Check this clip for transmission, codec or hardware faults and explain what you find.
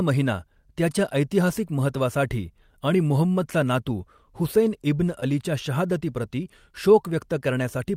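One fault is audible, a short concealed packet loss. It sits at 5.20 to 5.26 s, right after "मुहम्मदचा नातू हुसैन इब्न". About 10 ms of audio never arrived in time. The receiver filled it by extending the preceding sound and blending back. This leaves a brief smear in the speech.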